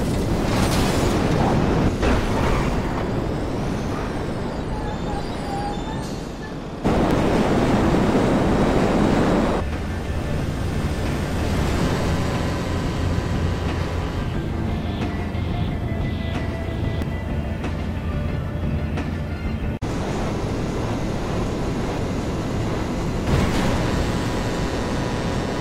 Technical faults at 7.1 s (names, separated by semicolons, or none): audio missing between chunks